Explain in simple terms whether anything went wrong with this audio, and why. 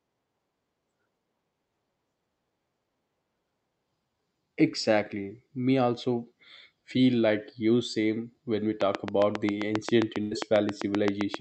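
Two things went wrong. From 8.81 s to the end of the clip there is a train of clicks: something, likely electrical interference or a faulty connection, kept injecting a sharp pulse about 7.5 times a second at a steady pace, so a regular ticking sits on top of the speech and carries on through the pauses.

At 10.21 to 10.33 s there is a burst of packet loss. About a tenth of a second of audio never arrived in time over the call connection. The receiver covered the gap by stretching out the last sound and fading it, heard as a brief held buzz or hiss, and then the speech picks up again with roughly 100 ms missing.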